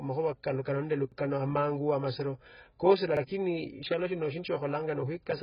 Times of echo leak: none

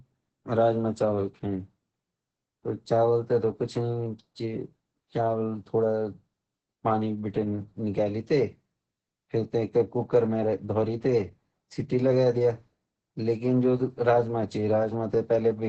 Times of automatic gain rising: none

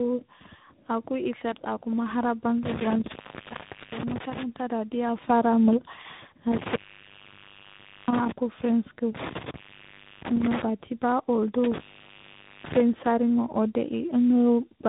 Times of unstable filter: none

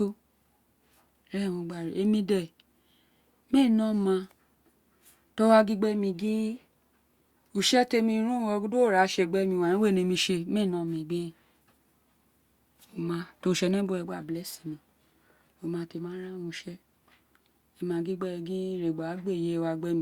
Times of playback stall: none

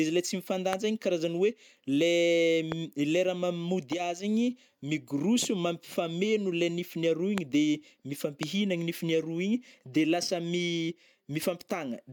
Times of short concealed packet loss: none

